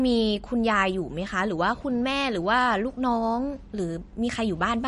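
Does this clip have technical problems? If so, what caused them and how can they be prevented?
Yes. Throughout, the speech sounds watery and swirly, likely from MP3 compression at a bitrate near 40 kbps. A spectrogram shows a hard cutoff at 10.6 kHz and flickering gaps. Encode at a higher bitrate or keep a lossless copy.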